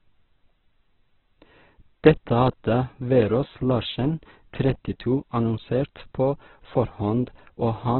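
From start to finish the speech sounds rough, grainy and noisy, with nothing above 4.2 kHz, so it comes across narrow and boxed-in. The likely cause is heavy Opus compression in its CELT music mode at a rate that fits about 8 kbps, which forces noise-filled bands and a narrowband cut-off.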